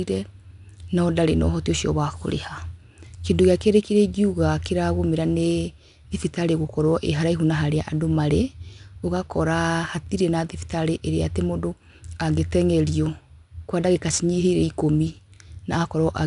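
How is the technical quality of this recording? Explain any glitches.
The recording is held back by one fault that runs through the whole clip: 4-bit ADPCM compression. The codec stores each speech sample as a coarse 4-bit step from a predicted value, adapting the step size as it goes, which fits a bitrate around 89 kbps. Its rounding error becomes a gritty hiss that rises and falls with the speech level, and consonant attacks distort where the step size lags. Nothing is heard above about 10.6 kHz, so the sound is also dulled.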